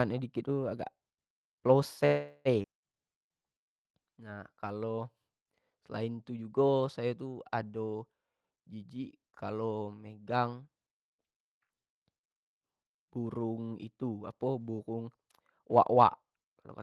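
A call audio freeze runs from 2.05 to 2.48 s. The sound stalls and the last fragment is carried on as a fading buzzy continuation for about 0.4 s, with no true silence. This is likely from packets held up in transit, leaving the jitter buffer empty so the receiver had to invent audio until the stream resumed. Nothing is lost; a 0.4 s pause has simply been pushed into the speech, adding that much delay.

A skip ahead follows at 2.63 to 2.67 s. Roughly a fifth of a second of speech is dropped and the playback jumps forward almost seamlessly, with only a few milliseconds of fill at the join. Audio that was already queued behind the gap played immediately, so the stretch before and after is butted together and that portion is simply absent, cancelling about half of the delay the freeze had built up.

A jitter buffer slow-down spans 3.01 to 4.97 s. Short pitch periods and slivers of pause are repeated over and over to build a reserve in a buffer running low, adding about 0.25 s. 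The speech plays at 88 percent speed while keeping its pitch, so sounds are stretched and drawn out.

Jitter buffer speed-up occurs twice, first from 8.53 to 9.88 s at 110 percent speed, removing roughly 0.15 s, then from 15.44 to 16.62 s at 118 percent, removing roughly 0.2 s. Here the buffer held more audio than its target, so small chunks of one or a few pitch periods were cut out repeatedly. Pitch stays the same while delivery becomes noticeably hurried, more so in the second, faster passage. Throughout, the sound is band-limited to around 12 kHz, which fits an Opus call codec at about 32 kbps.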